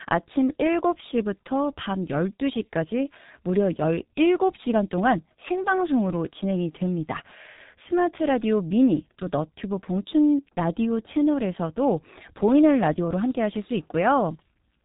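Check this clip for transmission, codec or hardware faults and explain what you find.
One fault runs through the whole speech clip: G.723.1 codec damage, heavy throughout. Nothing reaches above 3.8 kHz, and the codec rebuilds speech in 30 ms frames from a coarse, slowly updated voice model, which fits a bitrate around 6 kbit/s. The result is muffled, hoarse speech with smeared consonants. A simple narrowband channel would share the missing top but stay clean. The roughness and blurring are what point to this low-rate codec.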